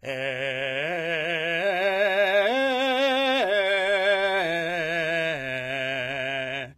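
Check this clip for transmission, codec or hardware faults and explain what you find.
One codec fault runs through the music. HE-AAC compression damage is present throughout, and it is plainly audible. The upper range sounds synthetic, with a gritty, metallic treble, and nothing is present above 14.9 kHz. This likely comes from HE-AAC's spectral band replication. Only the lower band is coded, and the treble is rebuilt by copying lower bands upward under a coarse envelope, so its harmonics don't align with the real ones. This points to a low bitrate around 24 kbps.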